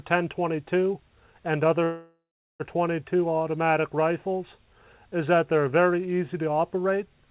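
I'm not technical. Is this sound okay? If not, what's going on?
No. From 1.84 to 2.62 s the sound stalls: the last bit of audio is stretched into a fading buzz or hiss, then there are about 0.39 s of silence before it picks up exactly where it stopped. This is a call audio freeze, most likely caused by data packets being held up so the receiver's buffer ran dry. Unlike a dropout, nothing is lost; a pause is inserted instead. The clip also has the narrow phone-call sound of the call line, with nothing above 4 kHz.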